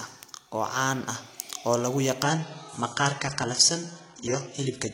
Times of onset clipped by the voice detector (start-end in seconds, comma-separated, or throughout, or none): none